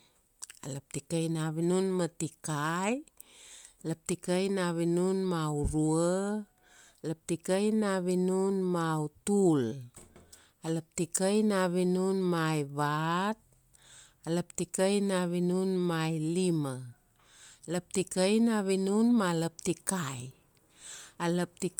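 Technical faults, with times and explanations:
Throughout, Bluetooth LC3 compression: the speech carries a plainly audible grainy, breathy edge, likely from LC3 coding that fits about 48 kbps with 10 ms frames. Sparse upper bands are coarsely quantised and patched with noise, though content still reaches 20.1 kHz.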